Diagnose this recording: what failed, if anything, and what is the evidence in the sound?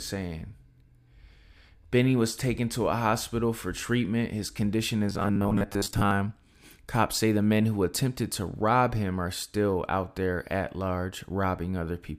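From 5.08 to 6.11 s there's robotic sound from repeated short buffers, a metallic 100 Hz buzz. Likely a starved driver buffer looping 10 ms chunks, about half of them repeats.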